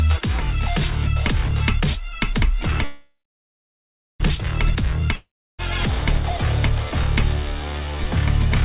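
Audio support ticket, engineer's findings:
Call audio freeze, 2.84 to 4.22 s. Last sound stretches into a fading buzz, then about 1.05 s of silence. Audio resumes where it stopped, nothing skipped, now running 1.36 s late. Likely a late-packet stall that emptied the jitter buffer.

Long network dropout, 5.15 to 5.60 s. Sound smears into a decaying hiss, then goes silent for about 0.34 s. Audio returns further along, with roughly 0.44 s never played. Likely packet loss in transit, with the receiver concealing the gap.

Band-limited throughout, nothing above 4 kHz, which fits a G.711 mu-law call path at 64 kbps.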